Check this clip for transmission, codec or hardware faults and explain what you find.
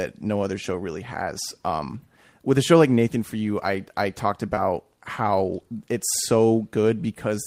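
Two related transmission faults sit together at about 4.55 to 4.59 s in the speech, both from packets lost on the way.

From 4.55 to 4.59 s there is a brief smeared, wobbly blur. This is short concealed packet loss. Roughly 20 ms of audio arrived too late for the decoder, and about 13 ms of that hole was papered over by stretching the preceding sound forward, continuing its pitch or its noisy texture, before crossfading back into the real signal.

The last part of that stretch, from 4.57 to 4.59 s, sounds grainier and rougher. This is a lost packet rebuilt from error correction. A single 20 ms packet went missing, but the next one carried a low-bitrate backup copy, which the decoder played instead of leaving a gap. That coarse copy is lower in quality than the original, so the rebuilt moment sounds noisier.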